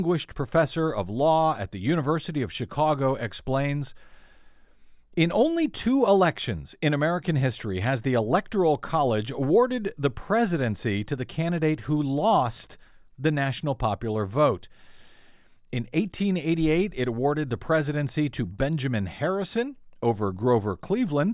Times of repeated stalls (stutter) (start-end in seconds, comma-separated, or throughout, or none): none